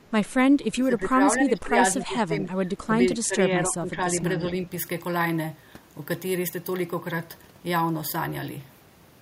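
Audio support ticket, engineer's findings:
Speech suppressed in double talk, 0.49–1.19, 1.37–3.01, 3.24–4.07, 4.34–4.68 s: near-end level ducks up to about 15 dB, shallower later. Likely echo canceller suppression. Gain dips, not hard packet-loss gaps.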